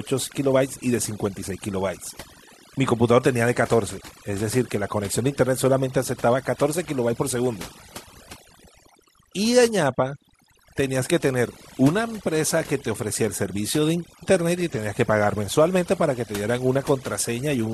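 Overdone noise removal runs throughout the speech. A noise reducer set far too aggressively mutes individual frequency bands whenever they sit near its noise estimate, taking quieter parts of the voice with them, so pauses collapse into near silence with twinkling specks.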